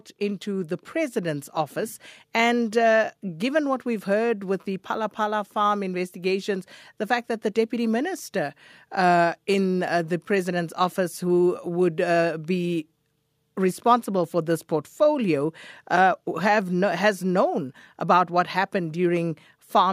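From 0.43 s to 10.84 s the whole recording slowly swells, the speech and the background noise rising together by about 5 dB, with the climb settling just before "who would uh be". This is automatic gain rising: the automatic gain control judged the input too quiet and kept nudging its gain upward over roughly ten seconds. Because it scales everything it receives, the room noise grows right along with the speaker.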